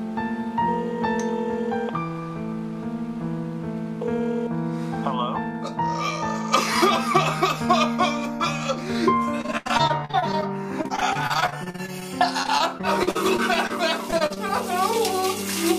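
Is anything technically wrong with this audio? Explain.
Yes. Repeated packet loss (robotic sound) affects 9.41–10.44 s, 10.82–12.03 s, 12.43–13.71 s and 14.11–14.38 s. Short holes, up to 83 ms, are patched by stretching the previous sound, giving choppy audio with pieces missing. On a spectrogram, frozen, smeared blocks alternate with abrupt vertical breaks.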